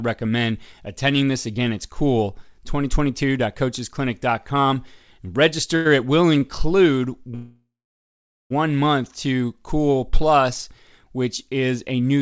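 A short stall from a late packet at 5.76 to 5.87 s: a packet missed its playout time, the jitter buffer emptied, and the receiver stretched the last bit of speech for 92 ms with a faint buzz or dip before resuming where it left off, so nothing is lost.

A call audio freeze at 7.35 to 8.52 s: the speech stops, a fading buzz or hiss gives way to 0.81 s of silence, and then it resumes exactly where it broke off. The likely cause is packets held up in transit, draining the jitter buffer. The 1.15 s gap is inserted rather than cut, so the later audio runs that much late, and the band-limited sound of the call path, with nothing above 8 kHz, carries on unchanged after it.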